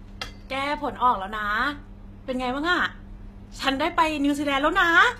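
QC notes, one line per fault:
Throughout, HE-AAC compression: the speech has a plainly audible treble that sounds synthetic, with s sounds coming out gritty, metallic and lispy. The damage points to a very low-bitrate stream in the region of 20 kbps, likely HE-AAC v2, where only the lower spectrum is actually coded and the upper band is rebuilt by copying lower bands upward under a coarse envelope. The rebuilt harmonics no longer line up with the real ones across the crossover.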